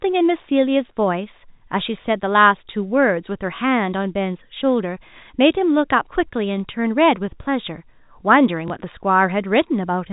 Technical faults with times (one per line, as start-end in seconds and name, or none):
2.02-2.04 packet loss with last packet repeated
8.68 packet loss with last packet repeated